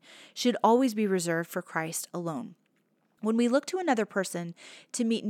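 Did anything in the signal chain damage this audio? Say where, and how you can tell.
No, nothing in the signal chain has left a mark on this speech recording that I can hear, so there's no stage to point to.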